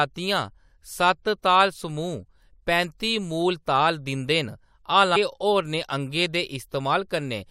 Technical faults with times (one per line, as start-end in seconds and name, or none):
0.90 damaged data in a compressed stream
5.15 damaged data in a compressed stream